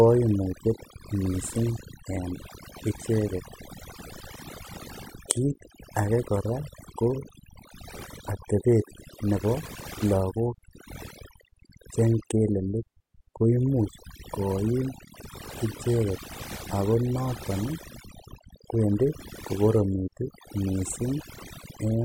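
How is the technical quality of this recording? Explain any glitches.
The quality is held back by one fault. Overdone noise removal runs throughout. Aggressive noise reduction shuts off bands near the noise estimate, leaving twinkling silence and quiet parts of the voice cut away.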